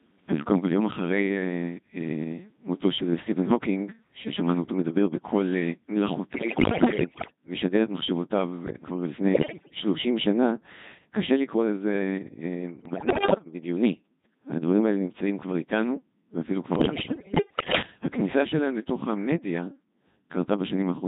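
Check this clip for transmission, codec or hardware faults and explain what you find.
Two faults are present: the whole clip has been through a very low-rate vocoder, and four short stretches are further wrecked by bit errors on digital voice radio.

Codec 2 vocoder, throughout the clip. The waveform isn't carried at all. The decoder receives only pitch, voicing, level and a coarse spectral envelope for each frame and rebuilds the speech from sine waves, which fits the 2.4 kbit/s mode. Damage here is heavy: the speech sounds robotic and buzzy, with a synthetic, hollow timbre and none of the natural texture of the original recording.

Bit errors on digital voice radio, at 6.34 to 7.36 s, 9.34 to 9.76 s, 12.86 to 13.46 s and 16.76 to 17.82 s. At this bitrate each bit steers the pitch, loudness, voicing or spectral shape of a whole frame, so corrupted bits, around 15 percent in three bursts and nearer 20 percent in the one at 9.34 s, rebuild frames with the wrong parameters. 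The speech jumps in pitch and level, changes tone colour abruptly, and breaks into bleeps, warbles and robotic gibberish.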